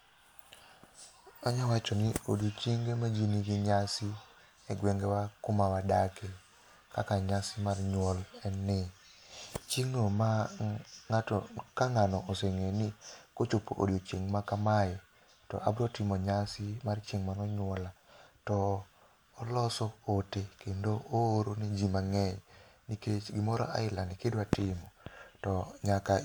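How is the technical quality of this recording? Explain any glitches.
No technical faults are audible.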